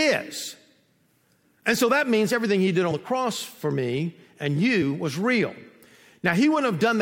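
At 2.88 to 2.92 s, just after "means everything he did" and before "the cross for me", compressed frames are skipped: the decoder drops about 20 ms of audio and jumps ahead.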